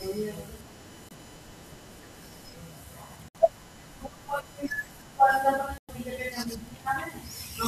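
From the first moment to the end, a steady USB whine sits under the speech. Its base pitch is 1 kHz, with the strongest component at its third harmonic, 3 kHz. It stays roughly 25 dB below the speech. The whine comes from the USB bus drawing current in regular 1 ms frames, which leaks into the audio through the power or ground lines. That 1 kHz family sets it apart from mains hum, which would sit at 50 or 60 Hz and its multiples.

The speech then cuts out three times, from 1.09 to 1.12 s, from 3.28 to 3.36 s and from 5.78 to 5.90 s. Each gap is longer than the last, roughly 21, 64 and 107 ms. These are likely Bluetooth dropouts, where audio packets reached the headphones too late and were discarded. The gap lengths fit the loss of one, three and five packets of about 21 ms each. The speech picks up further along as though it had kept playing. Nothing is repeated or stretched, which distinguishes these gaps from a stutter or a time-stretch repair.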